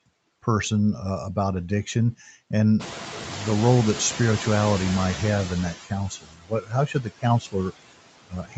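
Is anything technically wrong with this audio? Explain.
Yes. The speech has been through a noise suppressor that is audibly misbehaving in three ways.

Noise suppressor artifacts run through the whole clip. The suppressor decides frame by frame which frequency bands hold steady noise and turns them down, here by about 18 dB. Because that decision keeps changing, the background drops away in the gaps and swells back under the speech.

From 2.79 to 5.75 s the noise suppressor is catching up. The room noise jumps by about 19 dB at roughly 3 s. The suppressor's estimate of the noise still reflects the quieter level before the jump, so the new noise first comes through with little reduction. It then sinks gradually over nearly 3 s as the estimate adapts, ending at about 11 dB of reduction. The result is a burst of background that slowly fades rather than being cut cleanly.

Speech cut by the noise suppressor occurs from 6.1 to 7.55 s and again from 8.28 to 8.56 s. 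With the noise floor now only about 15 dB below the speech, the suppressor mistakes quieter parts of the speech for background. It pulls them down by as much as about 18 dB in the first stretch and about 17 dB in the second. Around 0.7 s of the first stretch and about a fifth of a second of the second are affected. Soft consonants and word endings there sound swallowed or faint.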